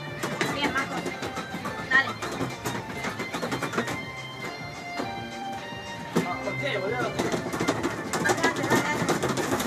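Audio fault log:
2.65 s, 5.41 s, 7.18 s: compressed frames skipped. Playback jumps ahead by about 50, 20 and 100 ms, consistent with whole 23.2 ms frames dropped.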